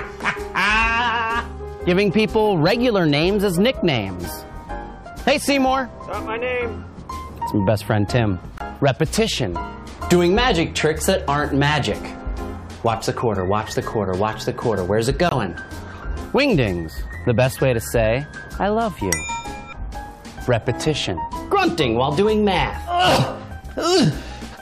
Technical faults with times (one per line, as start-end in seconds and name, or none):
8.58-8.62 corrupt frame muted
15.29-15.33 corrupt frame muted